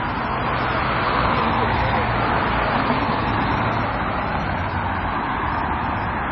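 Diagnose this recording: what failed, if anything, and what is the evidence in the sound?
The failure is at the codec stage, and the likely cause is MP3 compression. For the whole clip there is nothing above 5.9 kHz, a hard treble cut-off, and the damage is heavy, with a watery, swirling texture and smeared attacks. When the encoder is starved of bits it discards the top band outright and zeroes weak frequency lines, which then flicker on and off from frame to frame. That degree of loss points to a very low bitrate, around 24 kbps.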